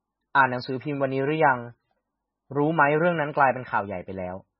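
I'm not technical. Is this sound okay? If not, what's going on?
No. Throughout, the speech sounds muffled and watery, with nothing above 5.6 kHz. That is likely heavy MP3 compression discarding treble and faint detail to save space.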